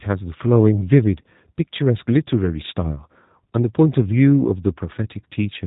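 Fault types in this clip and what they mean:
G.729 codec: The speech was squeezed through a low-rate VoIP coder that discards the waveform itself and transmits only a vocal tract filter, a pitch predictor and a handful of pulses per short frame, rebuilding the voice from those at the far end. The artefacts are plainly audible and fit an 8 kbit/s G.729A stream: the speech sounds rough and somewhat synthetic throughout, and nothing survives above about 3.8 kHz, so the sound is dull and band-limited.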